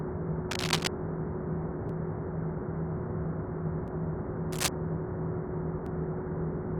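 From 0.50 to 0.88 s there's a burst of cable scratch noise, dense, uneven crackle about as loud as the sound itself, likely from a worn cable, connector or control whose contact resistance was jumping around. It comes back from 4.52 to 4.68 s.

At 1.89, 3.88 and 5.86 s there's an overlap between stream segments. These come every 2 s, at the segment boundaries. The player trims a few milliseconds that weren't actually duplicated, so the waveform jumps and you hear a tiny skip.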